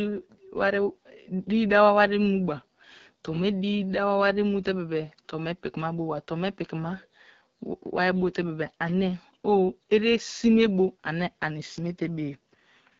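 From start to finish the speech runs through the AMR wideband (HD Voice) codec at a low rate. The rough, raspy texture points to about 8.85 kbit/s. The pulse-driven model can't track the voice finely, and the top band above 6.4 kHz is just shaped noise.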